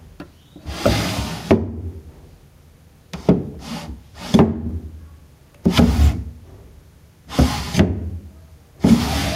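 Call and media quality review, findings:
Gain pumping, throughout the clip. Gain swings of around 10 dB. Likely input gain set far too high, with a fast limiter or AGC clamping every peak. Dynamics squashed.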